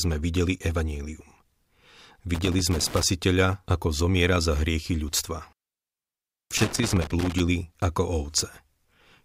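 A worn or dirty contact making and breaking gives loose connector crackle, chopping the speech into irregular scratchy bursts from 2.34 to 3.03 s and 6.57 to 7.40 s.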